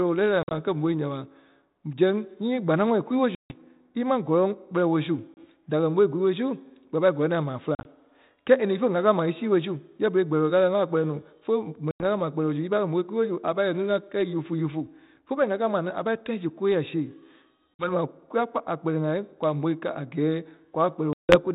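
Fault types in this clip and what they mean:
Packet loss on an ADPCM call: seven times across the clip, the speech drops to hard-edged silence where packets never arrived. Each loss removes 30 to 160 ms, and two of them break into scattered gaps instead of one hole. Afterwards the G.726 decoder's predictor and step size no longer match the sender's, so the speech returns at the wrong level or with a click and slight distortion, then settles within some tens of milliseconds.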